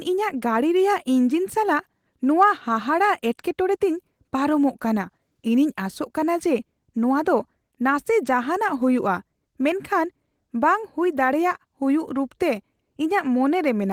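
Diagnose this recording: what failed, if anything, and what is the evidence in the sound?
Nothing stood out on listening to this speech recording; the Opus voice compression at around 20 kbps carries the full band up to about 20 kHz, with only the light coding texture expected at that rate.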